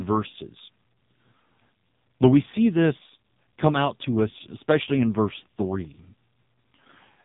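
From start to finish the speech has gone through an AMR narrowband mobile codec, so nothing above about 3.8 kHz survives. The heavy buzzy, synthetic edge comes from the vocal-tract model getting very few bits to rebuild each frame, which fits one of AMR-NB's lowest modes, around 5.15 kbps.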